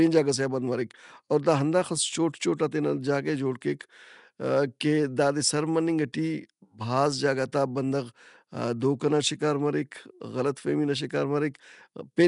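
From start to finish the speech carries a rough, hissy halo and a smeared, underwater blur, with nothing above 10.6 kHz, likely from Nellymoser compression at a rate pointing to 44 kbps. Unlike a plain low-pass, starved bands come back as noise, not silence.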